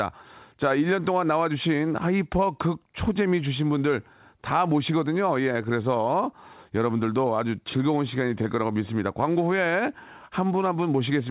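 No technical faults can be heard in this speech.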